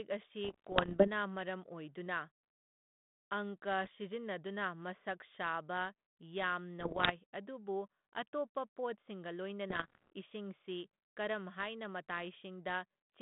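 Bit errors on an ADPCM link hit at 0.44–1.09 s, 3.84–3.98 s, 6.80–7.13 s (just before "ꯑꯗꯨꯕꯨ ꯑꯇꯣꯞꯄ ꯄꯣꯠꯁꯤꯡꯒ") and 9.7–10.1 s (between "ꯑꯗꯨꯕꯨ ꯑꯇꯣꯞꯄ ꯄꯣꯠꯁꯤꯡꯒ" and "ꯏꯁꯤꯡꯁꯤ ꯀꯔꯝ ꯍꯥꯏꯅ"). Each flipped bit knocks the decoder's step size and predictor off track, so errors at around one percent or more ring on as pops, rough bursts and brief level jumps. These show as spiky waveform excursions and broadband vertical streaks within the narrow telephone band, which fits a 32 kbit/s G.726 ADPCM line.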